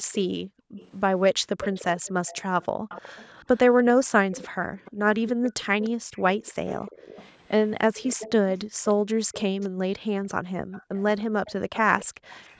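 This is a speech clip with two problems. A faint delayed copy of the talker trails about 298 ms behind from 0.12 to 9.69 s and again from 10.72 s to the end, sitting roughly 20 dB down. That's echo leak, likely from a loudspeaker on the far side whose echo canceller let some pickup through. Separately, the room background gets gated by the echo canceller, dipping by about 40 dB in spots between 0.02–1.48 s, 2.76–2.89 s, 6.01–6.15 s and 8.65–12.29 s as the canceller clamps the mic, then lets go.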